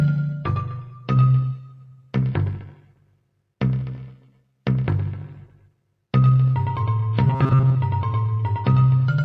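A noise suppressor applied to music or sounds runs through the whole clip, treating held material as noise; level swings by around 10 dB, visible as an uneven, pumping waveform envelope. Sound cut by the noise suppressor appears at 0.34–1.1 s, 1.53–2.15 s, 2.58–3.18 s, 4.16–4.43 s and 5.49–5.73 s. Each dip is about 12 dB at its deepest (about 11 dB in the last), with sustained energy and tails sinking and dark gaps in the spectrogram. From 7.27 to 7.76 s comes a robotic sound, likely from repeated short buffers: most of that stretch is replaced by a metallic 134 Hz buzz. This shows as evenly spaced vertical striations and a repeating waveform cycle.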